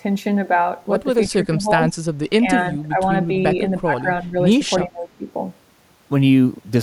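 Speech, with the talker's level sinking repeatedly at 1.35–1.91 s, 2.42–2.46 s, 2.7–3.0 s, 3.8–4.06 s, 4.22–4.36 s and 4.85–5.25 s, from a slight dip to roughly 30 dB down. This is likely speech suppressed in double talk, where an echo canceller cannot separate the talker from overlapping loudspeaker echo and turns the talker down along with the echo. Unlike packet-loss gaps, these are dips imposed by the canceller rather than lost audio.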